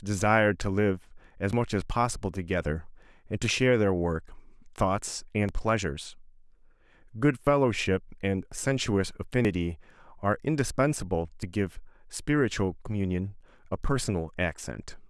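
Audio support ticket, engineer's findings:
Audio missing between chunks at 1.53, 3.51, 5.49, 7.47, 9.45, 11.43 and 13.41 s. Brief skips, each around 20 ms, recurring about every 2 s. The sound on either side is butted together with no gap. The fixed spacing points to the capture or processing stage handling audio in roughly 2-second blocks, likely dropping a slice each time one block is closed and the next opened.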